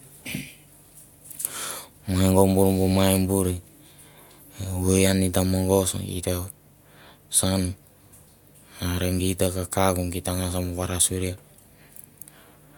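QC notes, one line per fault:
Nothing stood out on listening to this speech recording.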